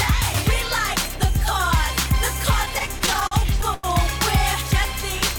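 Between 2.65 and 3.86 s, repeated stalls cause stutter. Late packets kept draining the jitter buffer. Ten gaps, up to 90 ms each, stretch the previous sound, so it drags.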